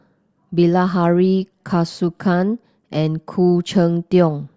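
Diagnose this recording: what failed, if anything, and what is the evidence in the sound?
Nothing failed in this speech recording. No stage of the chain, from capture through to playback, leaves any audible sign of trouble.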